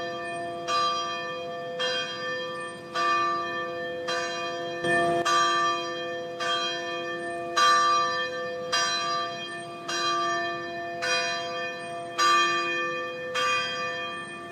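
At 4.84 s a sudden gain jump lifts the everyday sound and its background noise together by about 10 dB until 5.22 s, likely from a gain setting applied without a ramp. The waveform shows a step-shaped block; the spectrogram brightens uniformly across all frequencies.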